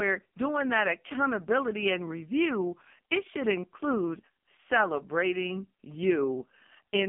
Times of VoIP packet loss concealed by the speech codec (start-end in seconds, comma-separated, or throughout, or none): none